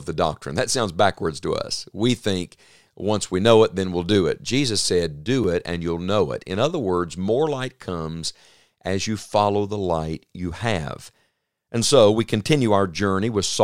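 At 5.44 s a block of digital silence cuts the speech for about 4.3 ms: the sound drops abruptly to silence and returns with no fade. Being so short, it sounds like a tick or dip rather than an audible hole, unlike a faded dropout.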